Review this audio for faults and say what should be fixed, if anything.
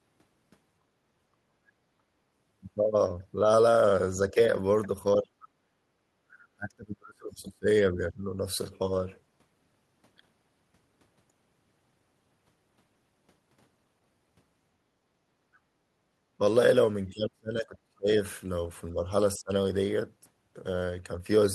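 Speech suppressed in double talk: the speech dips or drops out at 4.29–4.38, 5.22–5.59, 6.33–6.37, 6.56–8.24, 17.09–18.09 and 19.38–19.51 s, by roughly 10 to 40 dB, with the deepest losses at 17.09–18.09 s. This is likely the echo canceller mistaking overlapping far-end audio for echo and attenuating the near-end talker. The audio went over the Opus call path, whose band tops out near 12 kHz. To prevent it, tune the echo canceller's double-talk detection and reduce loudspeaker-to-microphone coupling so near-end speech is not gated during overlap.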